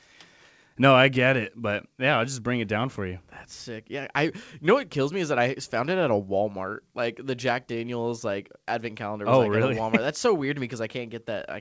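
Speech heard through a WebRTC call path that works as it should, with the band stopping at 8 kHz as fits a G.722 codec, and no technical fault anywhere in the clip.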